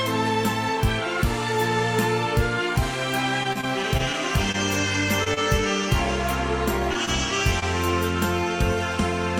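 From 3.43 to 4.16 s the audio turns choppy. This is repeated packet loss: six short gaps, about 40 ms of sound missing in all, each patched by extending the preceding audio. Brief smears or wobbles at 4.52, 5.24, 6.93, 7.05 and 7.6 s come from short concealed packet loss, each losing about 20 ms that the receiver filled by continuing the last sound. At 5.34 s a sound is held slightly too long: a short stall from a late packet, where the jitter buffer ran dry and the audio was stretched about 27 ms until the packet arrived.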